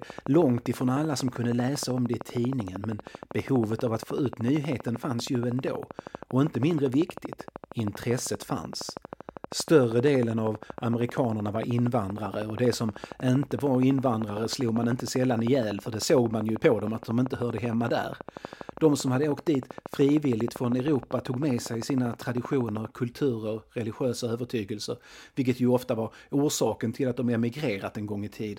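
From 0.02 to 22.86 s, a regular train of clicks at 12.7 per second, around 300 pulses peaking roughly 10 dB above the speech, ticks through speech and pauses until "kulturer religiösa övertygelser vilket", likely from electrical interference.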